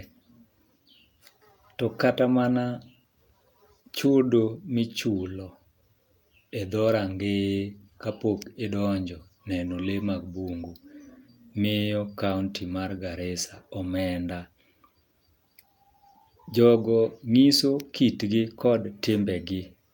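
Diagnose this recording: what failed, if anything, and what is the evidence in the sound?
Nothing failed in this recording, and the sound gives no evidence of a fault at any stage.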